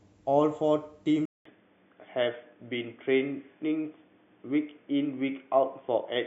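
Input switched to a poorer device at 1.25 s, after a 200 ms gap of silence. From there to the end, nothing passes above 3.5 kHz, so the speech turns dull and boxy at much the same level, with a faint new noise floor far below it. The likely cause is the recording moving to a narrower-band microphone or headset profile.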